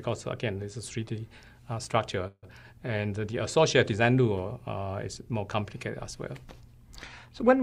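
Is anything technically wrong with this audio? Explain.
Yes. From 2.27 to 2.45 s the sound stalls into a fading buzz that ends in about 40 ms of silence, then resumes exactly where it stopped. This is likely a call audio freeze: delayed packets emptied the jitter buffer, so the receiver filled roughly 150 ms, adding that much delay without losing any audio.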